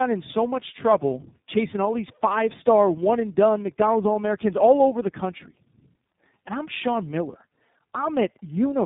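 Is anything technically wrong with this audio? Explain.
Yes. Tandem speech coding runs through the whole clip. The speech sounds as if it was squeezed by a low-rate AMR-type coder, passed over an ordinary telephone link, then re-coded by an iLBC-type coder that had to work on the first coder's damage. Nothing remains above 3.8 kHz, and the speech comes out rough, muffled and warbly.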